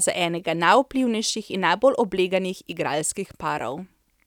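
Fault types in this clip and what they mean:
Dropped samples: a tiny fraction of a millisecond likely went missing from the stream three times, right after "za enega" and twice later, each heard as a single sharp click.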